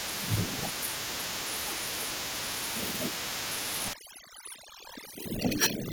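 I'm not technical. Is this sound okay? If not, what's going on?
No. Overdone noise removal from 3.93 s to the end: a noise-cleaning tool set too strong strips quiet parts of the voice, leaving twinkling near-silence behind it.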